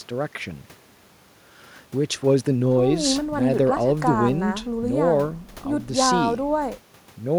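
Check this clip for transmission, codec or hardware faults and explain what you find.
No faults turn up anywhere in the speech. Nothing heard points to a problem in the transmission path, the encoding or the recording hardware.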